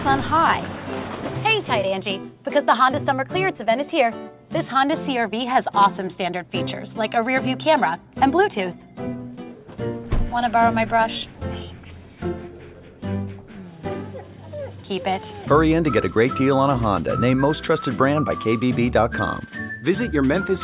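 No technical faults can be heard anywhere in this audio.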